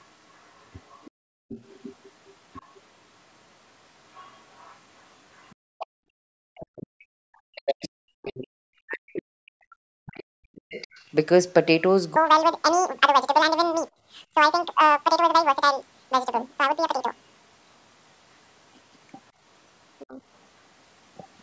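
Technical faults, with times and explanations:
0.0 to 11.1 s, other side's voice leaking through. A second, faint voice runs under the main speech for the first eleven seconds. It sits roughly 25 dB below the talker, so it is quiet. The likely cause is a loudspeaker playing the far end into the microphone, with the echo canceller failing to remove all of it. The residue that slips past tends to sound thin and scrappy.
1.18 to 1.55 s, 5.78 to 10.51 s and 20.04 to 20.19 s, speech suppressed in double talk. The talker's voice dips sharply or breaks up in these spans. The first and third are brief, about a fifth of a second or less. The middle one is long, with around four seconds affected. The deepest dips reach roughly 40 dB in the first two and roughly 20 dB in the last. Both sides seem to talk at once here, so the canceller pulls everything down together.
6.12 to 6.31 s, 10.87 to 11.0 s and 13.91 to 14.05 s, background gated by the echo canceller. 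The room tone briefly drops out, then comes back. Each gap lasts well under a quarter of a second. The drops are about 40 dB, 27 dB and 19 dB deep. The canceller clamps the microphone hard while the loudspeaker plays, then releases it. That makes the ambience vanish and snap back.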